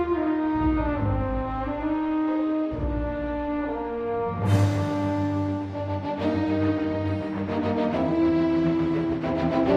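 No technical faults can be heard in this audio, so there is nothing to describe in time order.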